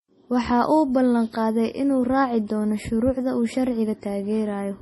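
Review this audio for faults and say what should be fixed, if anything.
Throughout the speech, the treble stops dead at 11.5 kHz, and the sound has a watery, swirling quality, with metallic chirps on s sounds and smeared consonant onsets. This is heavy damage, likely from MP3 compression at a bitrate that points to about 32 kbps: the encoder drops the top band and switches weak frequency lines on and off between frames. A plain low-pass filter would dull the sound without that shimmer. Encode at a higher bitrate or keep an uncompressed master.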